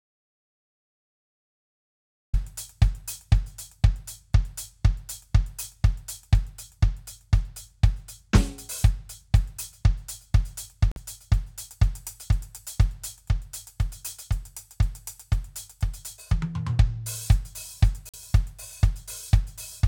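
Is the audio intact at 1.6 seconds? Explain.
No. At 1.6 seconds the music is inside an audio dropout to silence that is already under way when the clip begins and lasts until 2.34 s. The input was likely lost, through a disconnected source, failed link or mute, while the recorder kept writing silence. The gap is silent with no room tone at all, and the music then enters abruptly mid-phrase. That sets it apart from a quiet passage or a fade-in.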